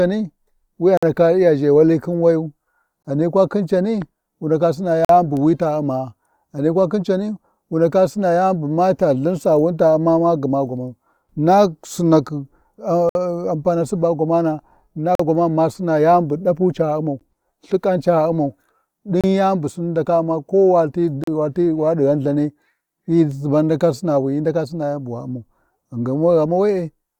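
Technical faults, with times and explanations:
0.97–1.03 s, 3.03–3.05 s, 5.05–5.10 s, 13.09–13.15 s, 15.15–15.20 s, 17.20 s, 19.21–19.24 s, 21.24–21.28 s: gap between stream segments. The speech stops dead for 14 to 59 ms, then resumes where it left off, for example just before "ghani kwa khin cani" and "bu wi ta". The holes fall at 2 s spacing, matching segment boundaries where timestamps leave a small gap that the player fills with silence. Nothing is lost; the timeline is stretched.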